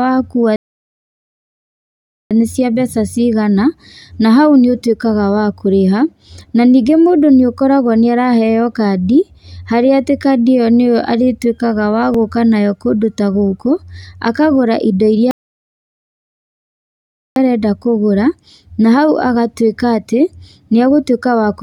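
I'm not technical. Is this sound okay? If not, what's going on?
No. Twice the speech stops dead and then picks up exactly where it left off: from 0.56 to 2.31 s (about 1.7 s of silence) and from 15.31 to 17.36 s (about 2.1 s). These are rebuffering stalls: playback ran out of downloaded audio and waited for more. Nothing is missing, only delayed.

At 12.14 s there's a slight jump in the speech, with no silence. This is likely a dropped buffer (overrun), where the system didn't collect a very short slice of audio in time and lost it, so the two sides were joined directly.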